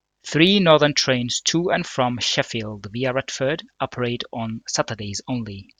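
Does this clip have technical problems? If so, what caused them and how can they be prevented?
Yes. Faint regular clock slip clicks run from 0.12 to 5.74 s, roughly every 70 ms. They are likely caused by two unsynchronised clocks, a few hundred ppm apart, each slip dropping or repeating one sample. Lock both devices to one shared word clock, or use sample-rate conversion between them.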